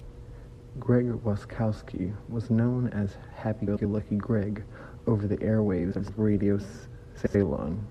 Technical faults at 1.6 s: none

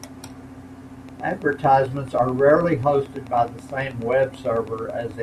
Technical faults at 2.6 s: train of clicks

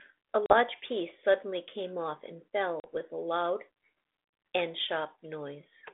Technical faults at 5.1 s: none

